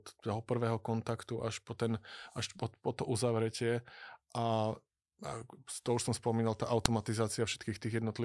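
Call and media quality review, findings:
Sharp click at 6.86 s in speech. File header played as audio: a WAV segment was joined with its header intact, so header bytes play as a brief loud snap.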